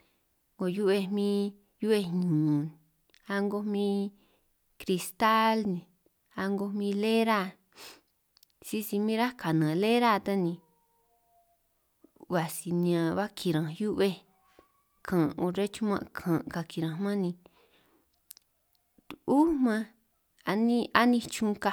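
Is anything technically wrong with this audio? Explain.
No, no technical faults can be heard anywhere in this speech recording.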